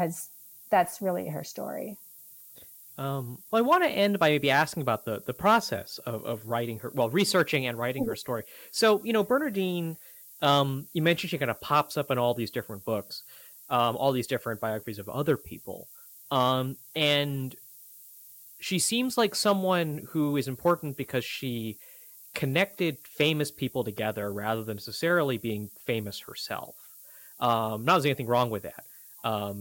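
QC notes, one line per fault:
Throughout: low bit depth with noise shaping. The speech is carried on only 7 bits, and the rounding error is fed back so its energy is pushed toward high frequencies, leaving a steady, thin hiss roughly 20 dB below the speech that grows brighter toward the top of the band. On a spectrogram this is a constant noise floor rising steeply with frequency, even in pauses. On the waveform, quiet stretches show coarse, grainy stepping instead of smooth decay.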